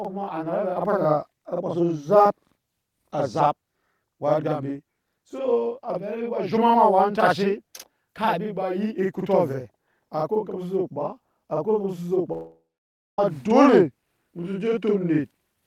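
Throughout the clip, every syllable is followed by a same-level copy about 46 ms later, heard as a slapback doubling. This is a channel delay (doubling): one channel runs late by a delay that fits a 2048-sample buffer, and both channels are summed to mono.

From 12.32 s to 13.19 s the speech cuts out. The last sound carries on as a fading buzz, then gives way to about 0.56 s of silence. Speech resumes with roughly 0.86 s missing, likely a long network dropout.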